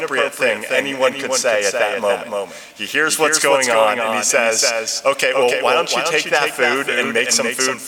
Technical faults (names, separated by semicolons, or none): doubled audio track